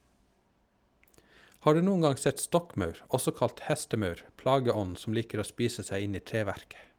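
Nothing stood out on listening to the speech recording.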